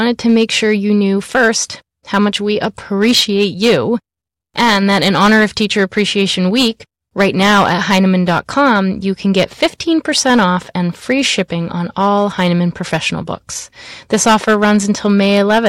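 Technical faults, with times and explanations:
Throughout: hard clipping. The speech is driven about 10 dB past what the signal path can pass, so every peak that exceeds the ceiling is sliced flat. Only a small share of the samples, roughly 2 percent, crosses that limit. The damage therefore sits on the louder syllables, where the squared-off tops add a spray of high harmonics. It is heard as a gritty, crackling edge on the loud moments.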